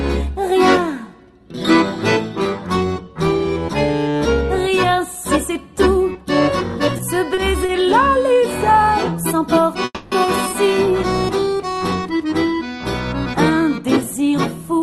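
At 7.34 to 7.39 s and again at 7.66 to 7.71 s there is a short stall from a late packet. Each time a packet was due but had not come, and the jitter buffer ran dry. The receiver stretched the last sound by about 30 ms to cover the wait. Then it carried on from the same point. Nothing is lost. The sound just hangs briefly, with a faint buzzy hold. Each stall adds about 30 ms of delay.

From 9.85 to 10.14 s comes a call audio freeze. The audio stops moving forward for about 270 ms. The last sound is held and decays into a fading buzz. The final 30 ms or so is silent. The likely cause is packets held up in the network long enough to empty the buffer. When the audio resumes, it picks up where it stopped. So a gap has been inserted, and nothing is missing.

From 13.80 to 14.79 s there is a jitter buffer speed-up. The buffer held more audio than its target, so the receiver trimmed it down. It cut many tiny slices, each one or a few pitch periods long. 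In total about 50 ms was removed. The audio runs about 5% fast with unchanged pitch and sounds slightly rushed. Throughout, the Opus call path limits the top end to about 12 kHz.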